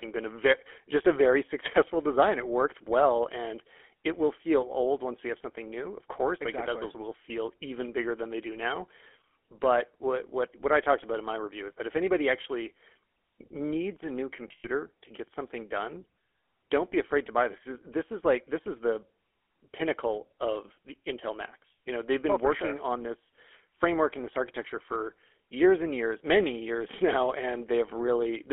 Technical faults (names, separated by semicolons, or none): GSM full-rate codec; lost GSM frames